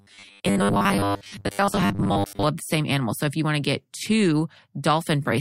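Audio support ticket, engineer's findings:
Robotic sound from repeated short buffers, 0.01 to 2.43 s, clearing just before "of the same animal". Stiff metallic buzz near 100 Hz, so roughly 10 ms chunks looping. Most of the real audio in that stretch gets skipped. Likely cause: starved input buffer or stalled capture thread.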